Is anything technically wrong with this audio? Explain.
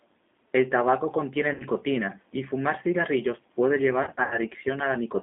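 Yes. The whole clip has been through a G.729 codec. It rebuilds the speech from a vocal tract filter, a pitch predictor and a few coded pulses per frame, at a rate that fits 8 kbit/s, over a line passing roughly 250 Hz to 3.6 kHz. The result is thin, clearly rough and synthetic.

There are two bursts of VoIP packet loss concealed by the speech codec. During each gap, the decoder extends its last pitch and filter settings and lowers the gain as it goes. From 1.54 to 1.64 s, about 60 ms is missing, and the sound smears into a fading buzzy tone or coloured noise. From 4.03 to 4.39 s, about 160 ms drops out in scattered pieces over 280 ms, with the longest gap 80 ms. This gives a broken, weakened stretch that takes a moment to recover.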